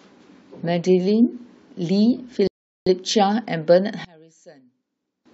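A speech recording with two faults. From 2.47 to 2.86 s the audio goes silent and then picks up exactly where it stopped, adding 0.39 s. That makes it a rebuffering stall rather than a dropout, because nothing is skipped. From 4.05 to 5.26 s the centred speech nearly vanishes, falling about 28 dB to a faint residue, likely from one channel inverted cancelling the shared content on mono summing. A plain volume dip would keep the full tone.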